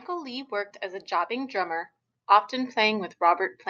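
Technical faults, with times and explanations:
0.06 to 1.93 s, automatic gain rising: The speech and the background swell together by about 4 dB over nearly two seconds. The automatic gain control judged the input too quiet. It raised its gain step by step rather than at once. So the level climbs smoothly, with no jump. The noise floor rises in step with the speech. The band tops out near 8 kHz, which fits a call codec working at wideband.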